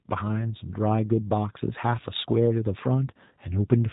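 From the start right through to the end, the speech carries G.729 codec damage, and it's plainly audible. Everything above about 3.8 kHz is gone, and the voice is rebuilt from a filter model and a few pulses, which fits an 8 kbit/s stream. That leaves it a bit rough and synthetic-sounding.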